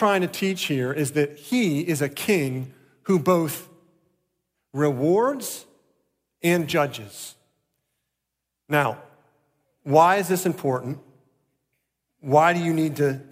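No technical faults can be heard anywhere in the recording; the speech signal stays steady and intact throughout.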